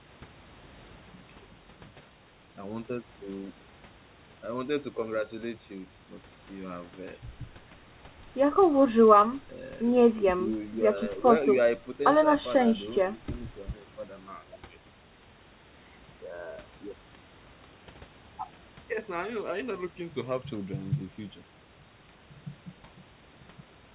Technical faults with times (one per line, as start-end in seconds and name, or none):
none